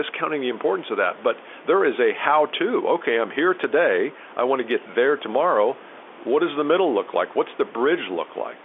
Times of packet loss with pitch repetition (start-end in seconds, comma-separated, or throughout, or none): none